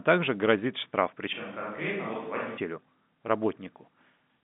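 After "так же грозит штраф", 1.33 to 2.58 s turns hollow, roomy and about 10 dB quieter, likely a switch to a distant microphone; the room echo rules out a simple gain drop.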